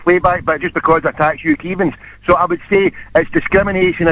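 At 1.54 s there is a short concealed packet loss: about 10 ms of audio failed to arrive, and the receiver bridged the gap by extending the preceding sound before blending back, leaving a brief smear or wobble within telephone-band audio topping out near 4 kHz.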